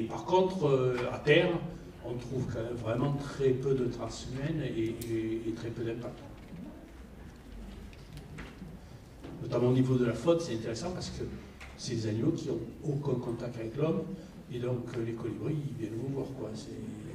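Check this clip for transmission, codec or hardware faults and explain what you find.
No transmission, codec or hardware fault is audible anywhere in the clip.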